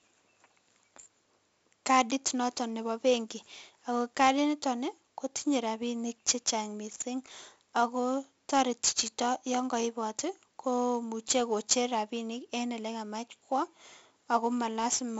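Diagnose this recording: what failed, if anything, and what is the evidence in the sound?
Codec stage: 4-bit ADPCM compression, heavy, throughout the speech. A gritty hiss rides on every loud syllable and rises and falls with level. Attacks distort where the step size lags. Nothing sounds above 7.7 kHz, which fits a 16 kHz rate at 64 kbps.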